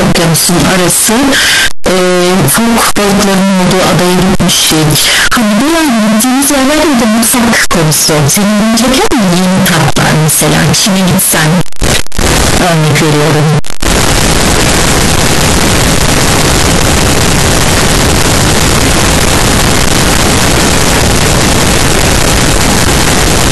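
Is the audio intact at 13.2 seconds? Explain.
No. At 13.2 seconds, as everywhere else in the recording, the speech is buried under very loud, harsh distortion, and the quieter stretches are as loud as the peaks. This is the signature of signed and unsigned mixed up, likely on 16-bit samples. Reading the samples with the wrong sign convention flips the top bit, so each small swing through zero becomes a jump from one end of the range to the other.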